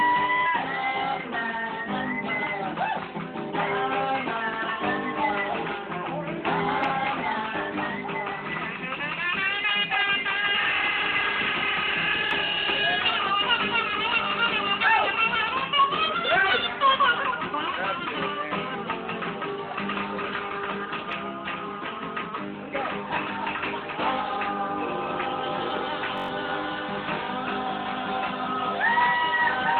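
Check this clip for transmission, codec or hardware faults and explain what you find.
One hardware fault is present. From 26.18 to 26.28 s, a system hang loop: the output froze and replayed a 21.33 ms buffer five times. This gives a buzzy stutter at 46.9 Hz and drops about a tenth of a second of audio. The loop length fits a 1024-sample buffer.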